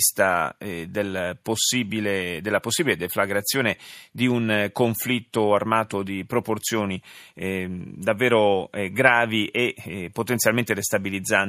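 Nothing goes wrong anywhere in this bit of speech, so there's no fault to point to at any moment.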